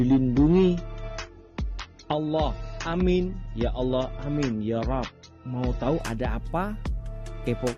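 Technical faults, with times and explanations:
0.0 to 6.0 s, adaptive stream starting at a low bitrate: the opening seconds have nothing above 7.6 kHz, with thin, smeared, swirly codec artefacts, which fits a low-bitrate AAC version chosen so playback could begin at once. At 6.0 s the player switches to a higher-bitrate version, about 96 kbit/s by the sound of it, and the treble and clarity return abruptly. Unlike a dropout or rebuffer, there is no gap or stall, and the quality only improves.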